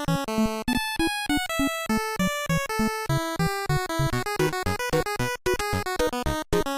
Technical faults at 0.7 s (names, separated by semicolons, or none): gap between stream segments